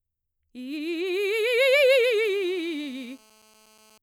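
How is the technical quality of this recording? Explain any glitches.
The music carries one interference fault, GSM phone buzz, running from 1.68 s to 3.98 s. A nearby 2G handset on a call transmits in bursts about 217 times per second, and some stage of the audio circuitry rectifies those radio pulses into the signal path. The result is a hard, raspy buzz at 217 Hz, rich in harmonics and unrelated to the music. It is nearly steady through this stretch and sits about 32 dB below the music.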